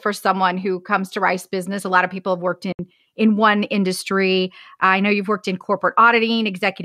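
Speech, with a likely Bluetooth dropout: packets missed their delivery window to the headphones, cutting a 64 ms silence from 2.72 to 2.79 s before speech resumes further on.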